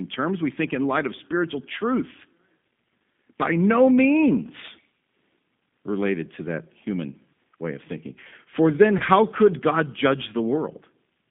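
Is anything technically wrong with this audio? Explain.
Yes, two things stand out. The whole recording carries G.729 codec damage, and there's a short dropout patched over by packet loss concealment.

The G.729 codec artefacts are clearly audible throughout. The speech has been rebuilt from a vocal tract filter, a pitch predictor and a few pulses per frame, with a bitrate that sounds like 8 kbit/s. Everything sits in a narrow 150 Hz to 3.6 kHz band, and the voice comes across rough and a bit synthetic.

The VoIP packet loss concealed by the speech codec falls at about 8.98 to 9.02 s. Roughly 20 ms went missing, which fits one lost packet. The decoder filled the gap by extending its last pitch and filter at falling gain, so you get a brief buzzy or noisy, smeared patch. The next bit of speech may also come back weak or distorted.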